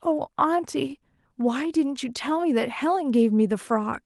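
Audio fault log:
No faults detected.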